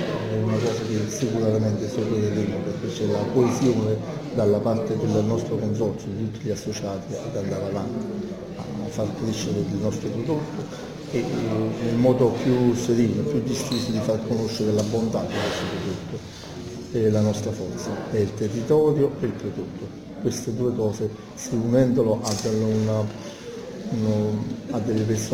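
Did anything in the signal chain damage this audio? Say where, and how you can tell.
Yes. The damage is at the sample-rate conversion stage, and it runs throughout. A gritty, inharmonic fizz follows the louder and brighter passages, sitting roughly 30 dB below the sound. That is crude rate conversion by nearest-sample picking, which fits a 48 kHz to 44.1 kHz change: samples are dropped on a repeating schedule with no filter. On a spectrogram, faint aliased lines appear unrelated to the real partials, and the waveform shows tiny periodic steps.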